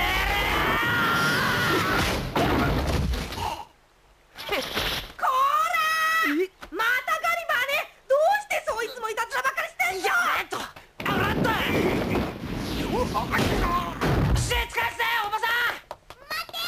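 From 15.51 to 16.59 s, periodic USB or driver dropouts cut out around 10 ms of audio every 54 ms, some twenty times. The lost stretches are skipped outright, producing rapid, evenly spaced ticks. Their strict regularity separates them from random buffer glitches.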